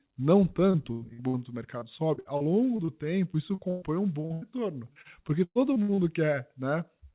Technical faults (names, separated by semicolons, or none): repeated packet loss (robotic sound)